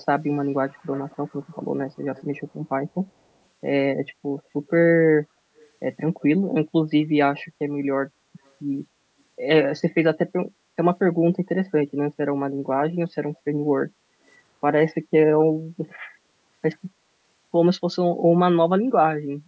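Speech with echo leak: a faint copy trailing about 233 ms behind, at 0.7–1.57, 2.15, 5.58 and 8.46 s. The likely cause is a loudspeaker's incompletely cancelled pickup.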